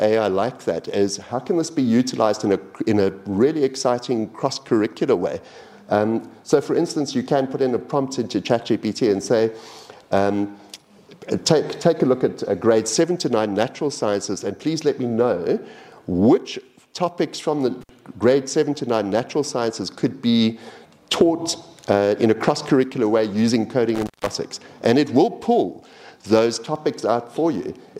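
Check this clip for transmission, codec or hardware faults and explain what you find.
There is one hardware fault, occurring twice. Intermittent contact at 17.81–17.89 s and 23.95–24.35 s: a loose connection briefly opens, dropping the sound for about 56 ms and then 167 ms, with crackle at each break and faint hiss in the gaps.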